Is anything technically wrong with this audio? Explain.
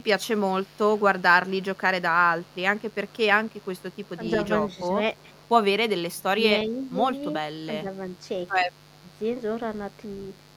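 Yes, the speech carries three kinds of fault.

Mains buzz runs through the whole clip, about 30 dB below the speech: a steady, raspy buzz built on 50 Hz. Switching spikes stack up harmonics well into the kilohertz range, which separates it from the smooth, pure hum of plain magnetic pickup.

Echo leak appears from 0.32 to 1.78 s, 2.41 to 4.09 s and 5.18 to 5.47 s as a faint copy of the speech trailing it by 358 ms. It is likely a far-end loudspeaker echo that the canceller failed to remove. The fixed delay marks it as echo, not room reverberation, which would smear continuously instead.

Speech suppressed in double talk shows as brief level dips at 4.35 to 4.78 s (slight), 6.16 to 7.02 s (deep, for around half a second) and 7.82 to 7.86 s (slight). The likely cause is an echo canceller ducking the talker while both sides spoke. The sound sinks rather than going silent, unlike a dropout.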